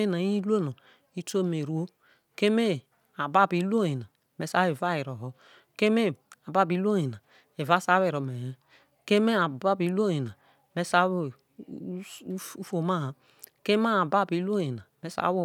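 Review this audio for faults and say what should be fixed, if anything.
No faults can be heard anywhere in this speech recording. Nothing needs to be repaired or reprocessed.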